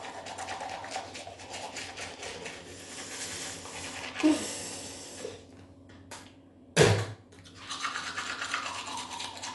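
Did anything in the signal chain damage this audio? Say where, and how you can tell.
Yes. Throughout, the audio is band-limited with nothing above 11.5 kHz, with dull tone and rough, fluttering noise around tones, likely Dolby Digital compression at a low bitrate near 64 kbps.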